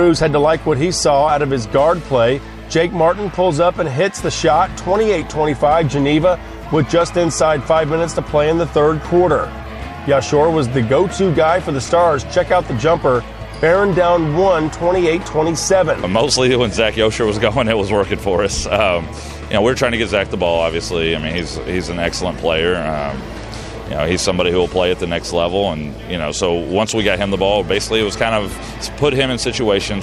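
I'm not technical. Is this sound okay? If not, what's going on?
No. From about 0.12 s to the end, a fast, steady rattle runs under the sound, made of tiny ticks arriving about twenty times a second, hundreds in all. These are clock slip clicks. The likely cause is two pieces of equipment each keeping their own time, with one running fast by roughly 0.05%. Each time that gap adds up to one sample, a sample gets dropped or repeated, leaving a tick.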